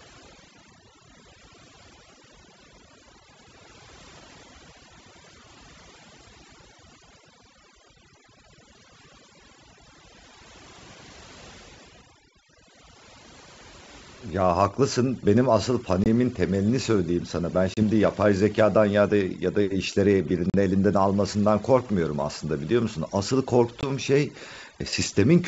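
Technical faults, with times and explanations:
Throughout: overdone noise removal. The noise reduction is set far too aggressively. Whenever a frequency band sits near the tool's noise estimate, it is pulled down hard or switched off, and quieter parts of the speech are caught with it. Between phrases the background drops and breaks up into scattered twinkling specks.
16.04 s, 17.74 s, 20.50 s and 23.81 s: packet loss on an ADPCM call. Each event is a hard-edged gap of about 20, 30, 40 and 20 ms respectively, which fits roughly two to four lost packets at a time. The gaps are filled with silence. Because the ADPCM decoder's predictor and step size drift out of step with the sender's during the gap, the speech re-enters with some distortion, then settles within a few tens of milliseconds. The wideband G.722 coding carrying the call adds at most a faint upper-band hiss.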